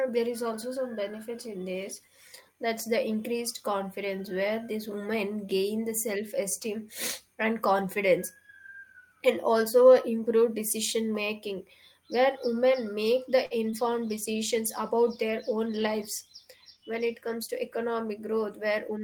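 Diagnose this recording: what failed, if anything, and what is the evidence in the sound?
A short stall from a late packet happened at the network stage. Just after "where women make the", from 13.45 to 13.53 s, a packet arrived late and the jitter buffer ran dry. The receiver held the last sound for about 53 ms until the packet came, then continued from the same point. Nothing is lost, but that sound is drawn out unnaturally, with a faint buzzy flattening, and everything after it is delayed by the same 53 ms.

Short concealed packet loss follows at 13.71 to 13.75 s, still just after "where women make the". About 20 ms of audio never reached the decoder in time, and the receiver's concealment extended the preceding sound to cover the gap before crossfading back into real audio. This is heard as a brief smear or wobble, and whatever fell in that 20 ms is simply gone rather than delayed.

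A call bitrate drop starts at 13.82 s and lasts to the end of the clip, about 5.2 s. The bandwidth estimate fell and the encoder was told to go from 32 to 18 kbps. The codec then coarsens its quantisation and trims high-frequency content, so the speech becomes duller and rough or watery, with sibilants losing their edge. It stays degraded because the rate never recovers before the clip ends.

A jitter buffer speed-up runs from 15.53 to 16.02 s, inside the low-bitrate stretch. The buffer was holding more audio than its target, so the receiver removed short pitch-period pieces repeatedly, roughly 50 ms in total, to reduce latency. The speech plays about 8% faster over that half second at unchanged pitch, giving a hurried rhythm.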